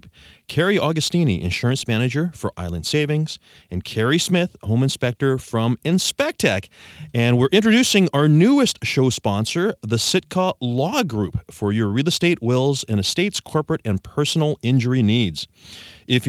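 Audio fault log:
No audible faults heard.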